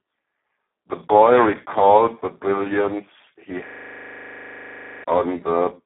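Hoarse, noisy, near-robotic speech with nothing above 3.8 kHz runs throughout: Speex codec damage at a very low bitrate, around 4 kbps, squeezed into a 200 Hz to 3.4 kHz line band. From 3.68 to 5.04 s a rapid buzzing stutter repeats a 40 ms slice at 25 Hz. This is a system hang loop, where the machine froze while the audio buffer kept cycling, losing about a second and a half of sound.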